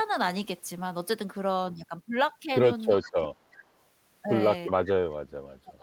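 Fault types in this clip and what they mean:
Speech suppressed in double talk: speech sinks about 25 dB near 3.0 s and about 35 dB from 4.69 s, likely the echo canceller muting during overlapping talk.
Echo leak: brief faint copies trail the speech by 365 ms, about 20 to 25 dB down, likely loudspeaker pickup the far-end canceller failed to remove.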